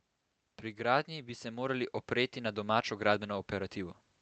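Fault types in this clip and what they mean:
Automatic gain rising: the gain control decided the input was too quiet and slowly pushed its level up, by about 6 dB between 0.74 and 2.67 s, so the speech and the background noise swell together over roughly two seconds instead of jumping.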